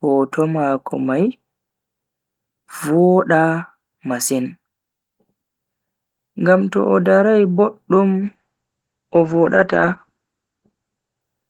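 Speech with a call bitrate drop from 8.25 s to the end. The encoder falls from roughly 32 to 10 kbps, coarsening and muffling the sound. A spectrogram shows energy above 8 kHz vanishing.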